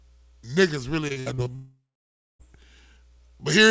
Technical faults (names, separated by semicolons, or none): repeated packet loss (robotic sound); long network dropout